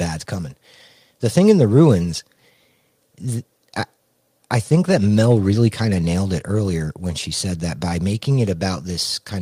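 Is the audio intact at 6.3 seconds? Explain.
Yes, the audio is intact at 6.3 seconds, with no fault to be heard at that moment.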